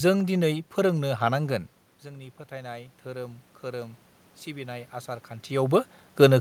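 From 2.03 to 5.92 s the automatic gain rising is audible: after the input dropped by about 16 dB, the control slowly raised its gain by about 6 dB. Unlike the talker moving around 1.5 s, the room noise swells along with the voice.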